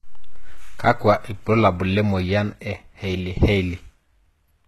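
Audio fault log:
Throughout, HE-AAC compression: the speech sounds bright but synthetic in its upper range, with s sounds turning gritty, metallic or lispy, and nothing at all above 12.3 kHz. The damage is plainly audible. The likely cause is HE-AAC at a very low bitrate, around 16 kbps, where only the lower spectrum is truly coded and the treble is regenerated from copied lower bands. Those copied harmonics fail to line up with the real ones across the crossover.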